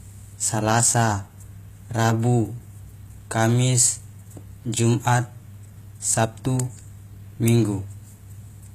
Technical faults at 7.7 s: HE-AAC compression

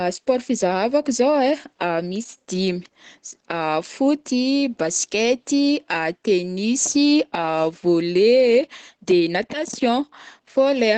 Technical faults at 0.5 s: Opus voice compression

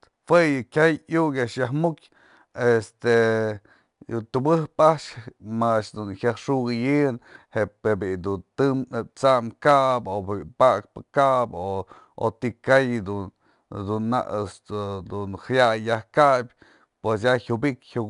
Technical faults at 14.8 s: 4-bit ADPCM compression

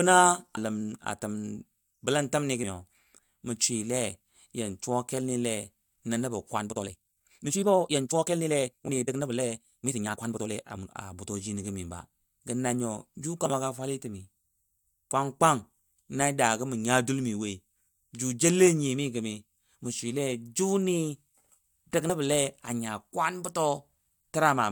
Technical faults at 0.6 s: damaged data in a compressed stream

